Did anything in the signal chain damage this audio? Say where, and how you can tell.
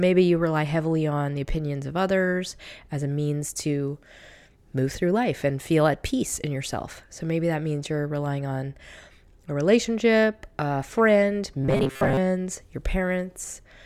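Yes, at the driver or buffer stage. From 11.62 to 12.19 s the speech collapses into a rigid, metallic buzz around 133 Hz that only loosely tracks the talking: classic robotic sound from repeated short buffers. That pitch points to a chunk of roughly 7.5 ms being looped. The likely cause is audio arriving too late, so the software kept replaying the last buffer for most of that half-second while the real audio was dropped.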